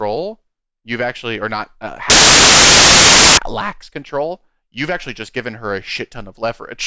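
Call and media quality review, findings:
Embedded cover picture decoded as samples (file tags played as audio), 2.10–3.37 s, after "actually or not uh": very loud white-noise burst, hard edges, until "lacks control you've actually".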